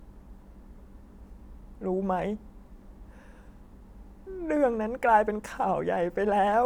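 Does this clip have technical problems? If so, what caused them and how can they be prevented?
No, nothing in this speech recording points to a technical fault, so there is nothing here to trace to a cause or to prevent.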